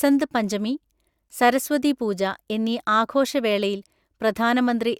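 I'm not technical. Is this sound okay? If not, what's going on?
Yes, the recording is technically sound, with nothing in the signal that needs fixing.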